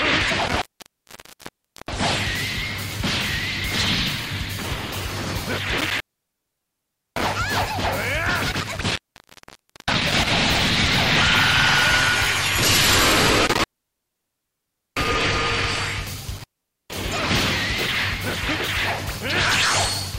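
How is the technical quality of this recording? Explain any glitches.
The technical quality is poor, because an intermittent contact keeps breaking the signal path. It happens five times: 0.46 to 2.04 s, 5.78 to 7.36 s, 8.52 to 10.31 s, 13.46 to 15.14 s, and 16.37 to 16.93 s. A loose cable or plug briefly loses connection, staying open for about 0.46 to 1.32 s each time. The sound drops out abruptly, with crackle where the contact breaks and reconnects, and faint hiss remains during each gap.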